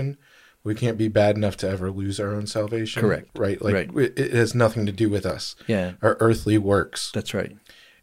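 At 5.30 to 5.32 s, just after "nothing to do with", a single loud pop cuts through the speech, peaking a few decibels above it. A sudden voltage pulse, likely from a plug, switch, static discharge or driver glitch, was added to the signal, and the following circuitry shaped it into a sharp thump while the speech continued underneath. On a waveform it shows as one tall, narrow spike; on a spectrogram, a thin vertical stripe spanning all frequencies.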